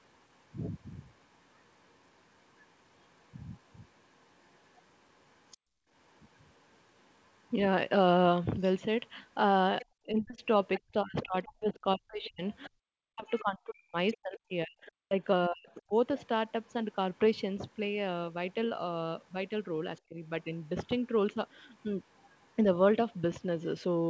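Speech over a call path with several echo-control faults. The echo canceller likely failed to remove all of the loudspeaker signal, so the other side's voice is leaking through: very faintly from 0.34 to 7.52 s, briefly at 9.81 to 9.86 s, more audibly (only about 20 dB under the talker) from 10.77 to 17.18 s, then in scraps at 19.95 to 20.00 s and 21.81 to 22.47 s. At 5.57 to 5.89 s the canceller clamped the microphone while the far end played. That is background gated by the echo canceller: the room sound drops by about 34 dB for roughly a third of a second, then returns. When both sides talked at once, the canceller likely could not separate the talker from the echo and pulled both down. This speech suppression in double talk runs from 10.06 to 15.93 s, with dips of around 40 dB totalling about four seconds. A milder, roughly 10 dB dip follows at 20.08 to 20.17 s. At 15.50 s a short concealed packet loss occurs: 20 ms of audio failed to arrive, and the decoder extended the preceding sound to cover the gap. 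It is heard as a brief smear within the double-talk passage.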